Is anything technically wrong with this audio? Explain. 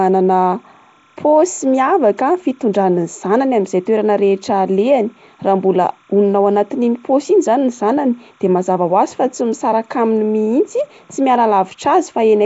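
Yes, two faults run through the whole speech clip.

Timecode bleed is present from start to finish: a linear timecode signal on an adjacent track or cable has leaked into the audio path. That code is a square wave flipping between two pitches, here near 1 and 2 kHz, and its repeating pattern fits 29.97-frame timecode. It sits about 40 dB below the speech, so it comes through as a faint, steady chirping warble behind the voice.

The whole clip also shows plainly audible coding damage, and the likely cause is Nellymoser compression, the old Flash microphone codec, at a setting that fits a 32 kbps stream. This codec works in short blocks with a fixed, small bit budget, so weak frequency bands get no bits and are filled with noise instead. Nothing comes through above 7.7 kHz, and the speech carries a rough, hissy halo with a smeared, underwater quality.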